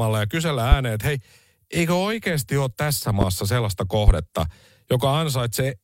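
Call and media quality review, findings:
Loud pop, three single pops, each about 30 ms: 0.72–0.75 s (after "ja kysellä", before "ääneen että hei eikö"), 3.21–3.25 s (after "eikö oikeasti ole tässä"), and 4.08–4.11 s. Each peaks roughly 20 dB above the speech, which continues underneath. A tall spike on the waveform and a thin broadband vertical stripe on the spectrogram. Likely a voltage transient from a connector, switch or driver glitch.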